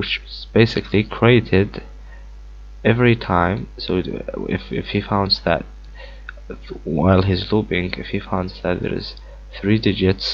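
No technical faults are audible.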